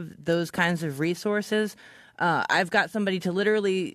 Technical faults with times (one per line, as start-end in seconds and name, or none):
1.51 damaged data in a compressed stream